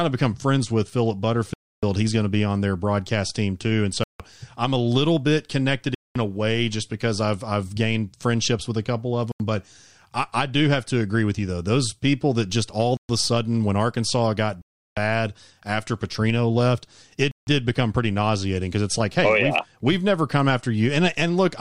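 Bluetooth stalls at 1.54, 4.04, 5.95, 9.32, 12.97, 14.62 and 17.31 s cut the speech to silence for 0.08 to 0.35 s before it resumes, likely from interference delaying packets until the headphone buffer drained.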